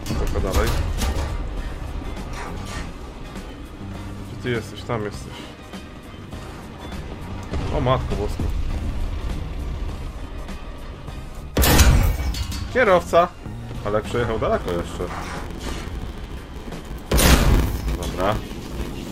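From 14.59 s to the end, a block size mismatch (padded) appears: short blocks reach a larger read, which fits 512 samples, and zeros fill the rest. A 93.8 Hz buzz results and playback slows to 0.861x. The waveform shows regular dropouts, and the spectrogram shows periodic vertical gaps.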